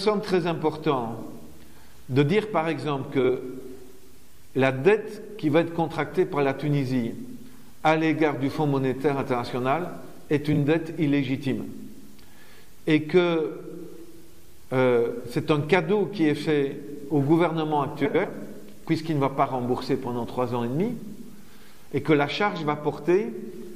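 Frames out of order occur at 3.19 to 3.30 s, 10.52 to 10.58 s and 18.05 to 18.25 s. At each point, two adjacent runs of decoded audio play in reversed order, so the second half of the short stretch is heard before the first. This produces a garbled flutter. The swapped blocks are about 46.4 ms, 23.2 ms and 92.9 ms each, which fits two, one and four codec frames of roughly 23 ms. No audio is lost and the timing around each event is unaffected.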